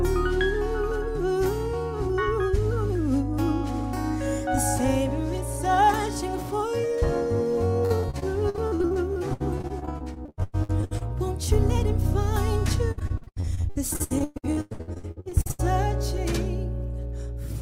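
From 7.85 to 11.10 s the audio breaks into repeated packet loss (robotic sound): dozens of brief holes, the longest about 99 ms, each papered over by stretching the preceding sound, so roughly 28% of the stretch is concealed. It comes back harder from 12.91 to 15.71 s, with gaps up to 117 ms and nearly half the span concealed, giving a choppy sound with pieces missing. A spectrogram shows smeared, frozen harmonic bands; the waveform shows repeated, flattened envelope segments.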